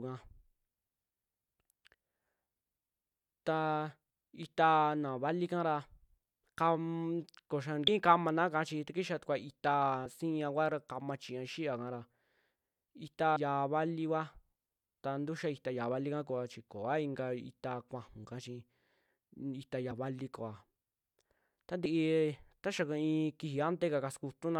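This is a speech clip where compressed frames are skipped at 7.87, 13.35, 18.22–18.26, 19.90 and 21.84 s. Missing or rejected frames make the audio jump ahead by anywhere from a few tens of milliseconds to about a tenth of a second.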